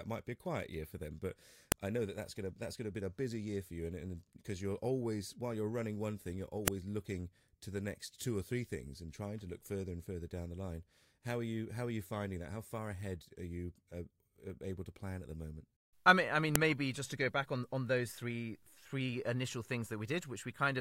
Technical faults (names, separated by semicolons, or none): file header played as audio